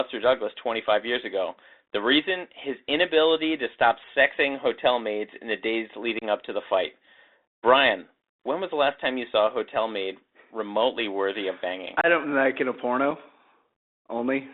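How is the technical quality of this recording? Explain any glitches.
The recording has clear technical faults: a narrowband headset codec throughout and three short dropouts in the speech.

Bluetooth CVSD headset codec, throughout: the band runs only from about 250 Hz to 3.7 kHz, consistent with a 64 kbps CVSD link. Its one-bit adaptive-step coding leaves granular hiss, scratchy s sounds and distortion on loud high content.

Unconcealed Bluetooth headset packet loss at 6.19–6.24 s, after "maids in the days" (about 30 ms); at 12.01–12.06 s, after "remotely worthy of banging" (about 26 ms); and at 13.11 s, after "don't like in a" (about 4 ms). Lost voice packets, roughly seven each in the longer gaps and one in the last, were replaced with silence or an idle pattern. The result is abrupt holes and a brief quieter return.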